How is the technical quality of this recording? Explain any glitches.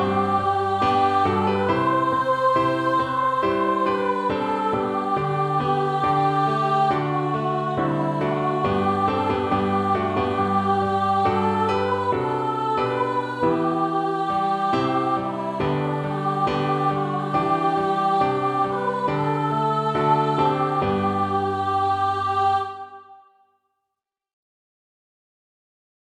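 The recording's technical quality is sound, with no glitches to explain.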